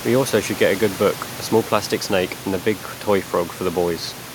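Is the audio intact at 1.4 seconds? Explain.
Yes, the speech at 1.4 seconds is intact, with only the room's own background noise sitting about 18 dB below the voice.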